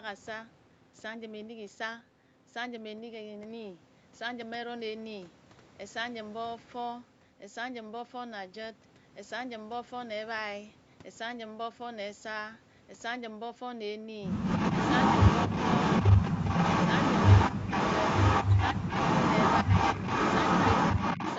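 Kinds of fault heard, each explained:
Echo leak: From 14.4 s, a copy of the speech returns about 227 ms late at roughly equal loudness, likely an imperfect echo canceller; unlike reverberation, it is a distinct repeat.
Speech suppressed in double talk: Six brief dips between 16.3 and 21.0 s, some shallow and some near 20 dB deep, likely the canceller ducking both talkers, rather than dropouts from packet loss.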